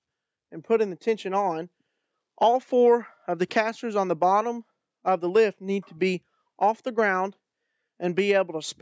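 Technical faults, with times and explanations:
Nothing stood out as a technical problem on listening.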